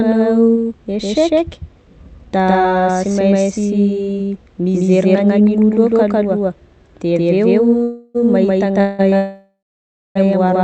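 Throughout the clip the speech is heard twice: a second full-band copy, about as loud as the original, follows roughly 150 ms behind with no decay or room colour. This doubled audio track likely comes from the signal being captured again over a slower path.

Three call audio freezes follow, at 7.83 to 8.17 s, 8.81 to 9.01 s and 9.17 to 10.17 s, the last two just after "aveo mahita". Each holds the last sound as a fading buzz or hiss. The longest fades into about 0.6 s of silence. Speech then resumes where it stopped, so nothing is lost but gaps of 0.31, 0.18 and 0.99 s are inserted, likely from delayed packets draining the jitter buffer.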